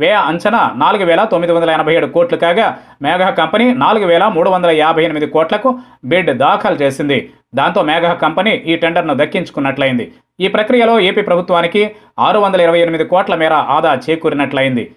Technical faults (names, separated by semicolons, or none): none